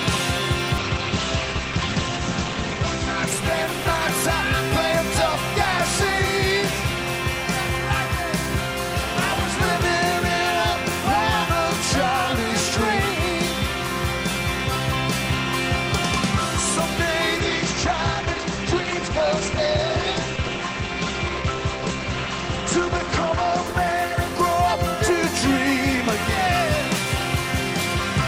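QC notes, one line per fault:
0.79–6.31 s and 17.41–26.72 s, call bitrate drop: the bandwidth estimate collapsed twice, forcing the encoder from what sounds like about 64 kbps down to roughly 13–14 kbps. Coarser coding makes the audio rough and watery, and the top end narrows from 20 kHz to 8 kHz, so everything turns muffled. The worst stretch lasts about 2 s in the first episode and about 6 s in the second before the bitrate recovers.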